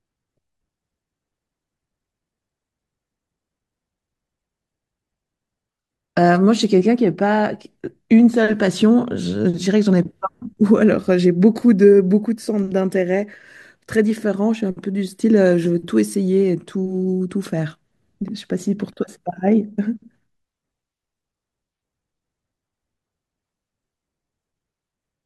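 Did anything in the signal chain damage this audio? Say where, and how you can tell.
No, no damage is audible.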